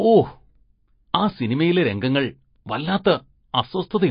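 Throughout, the speech sounds watery and swirly with nothing above about 5.1 kHz, likely MP3 compression at a low bitrate near 27 kbps dropping weak frequency lines.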